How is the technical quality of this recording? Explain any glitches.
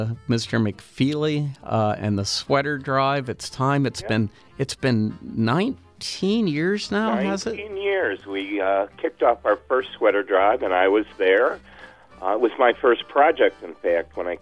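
Nothing in the recording stood out as a glitch or technical problem on listening.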